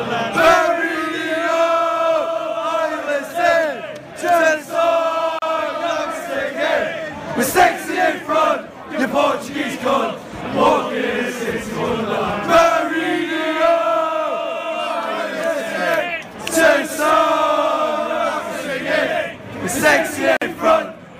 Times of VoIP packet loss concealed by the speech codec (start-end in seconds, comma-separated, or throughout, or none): none